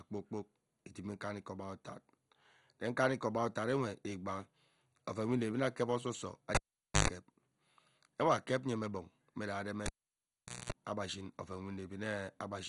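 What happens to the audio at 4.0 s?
At 4.0 s the speech is going through what is likely MP2 compression, which affects the whole clip rather than that moment alone. With too few bits, the encoder shuts off entire upper sub-bands and coarsely quantises the remaining ones, consistent with a low rate around 56 kbps. Nothing is heard above 11.2 kHz, so the speech sounds dull, and the heavy quantisation leaves a gurgling, granular roughness as bands flicker in and out.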